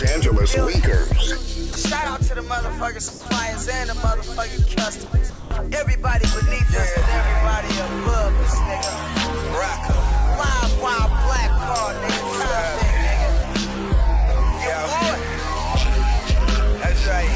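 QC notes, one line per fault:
1.73–1.76 s, 5.06–5.12 s, 5.30–5.51 s: sound dropped by the voice detector. Steady synthetic noise replaces the sound for 30, 60 and 210 ms, then the sound returns. The sender's detector likely mistook real sound for background, losing about 30, 30 and 90 ms.
3.08–3.26 s: comfort noise in place of the background. For 180 ms the real background, about 19 dB below the loud parts, becomes a smoother noise about 2 dB quieter. The sender likely stopped sending during a pause, and the receiver filled the gap with generated noise.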